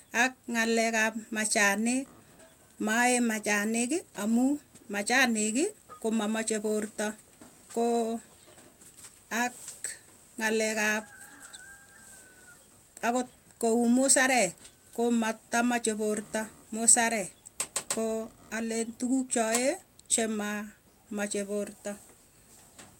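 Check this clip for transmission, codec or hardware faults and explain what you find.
Two kinds of transmission fault are present in this speech clip.

At 2.05 to 2.22 s the speech jumps forward with almost no gap: a skip ahead, where about a second of audio was dropped.

From 2.62 to 3.28 s and 3.92 to 6.59 s speech runs about 8% fast at unchanged pitch: jitter buffer speed-up trimming pitch periods to shed excess delay.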